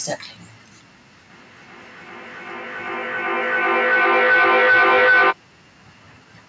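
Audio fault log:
1.3–5.91 s, feedback howl: two devices sharing the call in one room are feeding each other, and each pass from loudspeaker back into microphone comes out louder, so the repeats build rather than decay and narrow onto the loop's favoured frequency. The result is a tone near 1.5 kHz, peaking about 30 dB above the speech and pulsing roughly every 400 ms. On a spectrogram it shows as a bright horizontal line with regular swells. In the waveform it looks like a swelling envelope that ends abruptly when the loop breaks.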